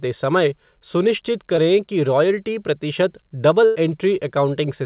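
Speech heard through a call path that carries nothing above 4 kHz, consistent with G.711 A-law telephony, has two dropouts. At 1.56 s, between "समय सुनिश्चित" and "कि रॉयल्टी प्रतिशत", a brief smear lasting about 0.03 s blurs the sound. This is short concealed packet loss: roughly 20 ms of audio arrived too late or not at all, and the receiver covered the hole by extending the preceding sound before blending back into the real signal. From 3.65 to 3.77 s, just after "कि रॉयल्टी प्रतिशत", the sound turns into a held, fading tail and then resumes further on, with about 100 ms of material gone. This is a burst of packet loss: several consecutive packets were lost, and the decoder kept repeating the last sound while lowering its level until real audio returned.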